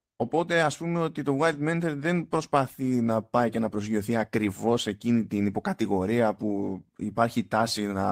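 No audible technical faults present.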